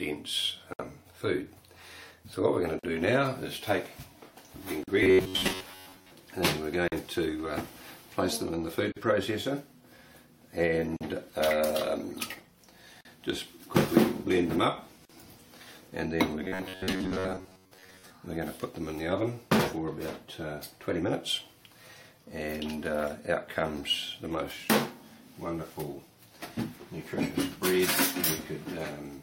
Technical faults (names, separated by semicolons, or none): gap at a join of encoded pieces; robotic sound from repeated short buffers